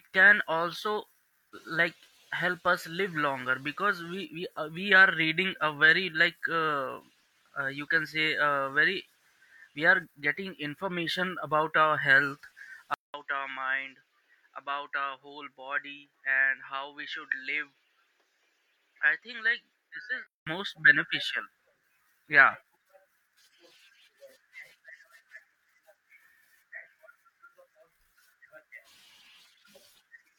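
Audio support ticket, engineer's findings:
Input switched to a poorer device, 12.94 to 20.47 s. Speech turns dull, nothing above 7.6 kHz, about 5 dB quieter, different noise floor about 50 dB down, 200 ms gap at switch. Likely mid-recording change to narrower-band input.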